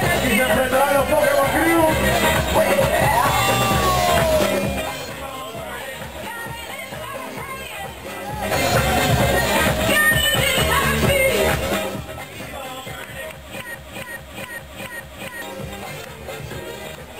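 From 13.75 s to 15.42 s a fragment of about 0.42 s plays four times back to back, each repeat identical, so the sound stutters in place like a stuck record before moving on. This is a broken-record loop, most likely caused by the player, encoder or stream stalling and resending the last piece it held. Whatever audio belonged in those 1.7 seconds is gone, replaced entirely by the repeats.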